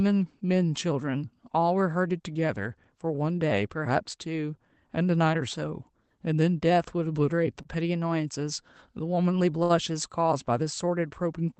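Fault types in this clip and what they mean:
Short stall from a late packet: at 7.62 s and again at 9.63 s the speech briefly hangs, one sound held on for about 29 ms and then about 63 ms, with a faint buzzy sameness before it moves on and nothing skipped. A packet arrived late, so the jitter buffer ran dry and the receiver stretched the last audio until the data came, then resumed from the same point, leaving everything after it slightly later.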